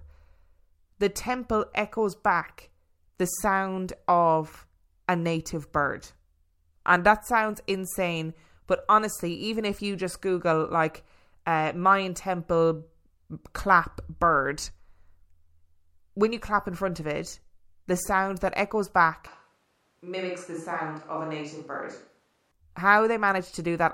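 From 19.27 to 22.52 s the close microphone's signal likely drops out, leaving a switch to a distant microphone. The speech turns abruptly roomy, hollow and thin in the bass, about 5 dB quieter, with room noise around 35 dB below it, then snaps back.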